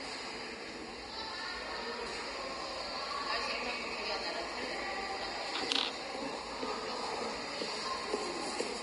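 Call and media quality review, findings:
Vorbis compression, whole clip: hissy, grainy treble, roughened tones, smeared attacks, nothing above 10.6 kHz. Likely a low-quality Vorbis encode; heavy damage fits roughly 32 kbps, with high-band detail quantised into noise-like fill and the top band cut off.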